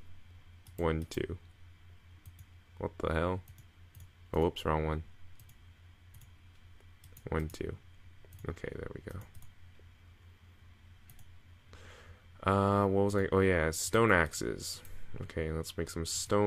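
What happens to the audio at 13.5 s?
Nothing goes wrong at 13.5 s; the audio plays through that moment intact, with no dropout, click or distortion.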